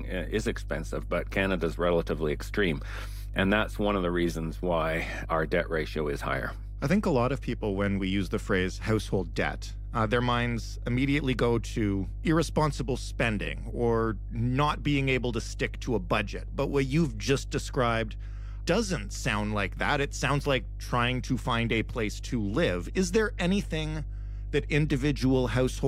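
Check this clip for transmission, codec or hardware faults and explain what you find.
One hardware fault is present: mains hum runs through the whole recording. A steady, low buzzing tone sits under the speech from start to finish at 50 Hz, with a few low harmonics above it. It is loud, only around 10 dB below the speech, so it fills every pause. The cause is power-line energy leaking into the signal path, typically through a ground loop between connected equipment or from a transformer placed too close to the cabling.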